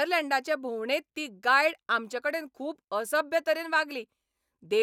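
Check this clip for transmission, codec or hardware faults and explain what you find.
No technical fault can be heard in the speech signal, which stays continuous and stable throughout.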